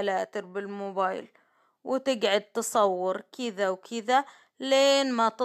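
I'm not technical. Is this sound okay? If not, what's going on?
Yes, this one's fine: nothing in the recording jumps out as a technical problem, so there's nothing you need to worry about.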